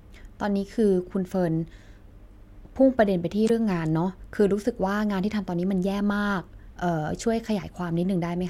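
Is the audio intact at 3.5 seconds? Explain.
No, there's a glitch right there. From about 3.44 to 3.51 s, roughly 70 ms, the speech hits damaged data in the compressed stream: some of the encoded bytes are wrong, so the decoder misreads or throws out those frames, loses sync and hunts for the next valid frame header before picking up again. What you hear is a brief chirpy squawk or blip cutting into the speech at that spot.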